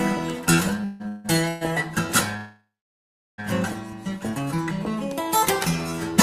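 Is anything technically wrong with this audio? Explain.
Yes, there are two faults.

From 0.81 to 1.63 s there are repeated stalls (stutter). Packets arrived later or slower than playback, so the jitter buffer emptied four times and the receiver stretched the last sound to bridge each wait, the longest 164 ms. More than half that stretch is filled-in sound, so nothing is lost, but the audio drags and stutters.

From 2.37 to 3.40 s there is a call audio freeze, likely caused by packets held up in transit that drained the buffer. The last sound is held and fades, then about 0.73 s of silence follows before the audio resumes where it stopped, now running about 1 s late.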